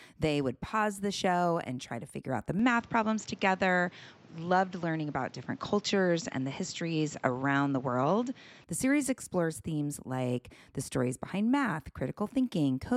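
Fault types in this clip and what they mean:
Input switched to a poorer device: likely a change of microphone mid-recording, so from 2.59 to 8.64 s the speech loses everything above 7.6 kHz and gains faint new background noise.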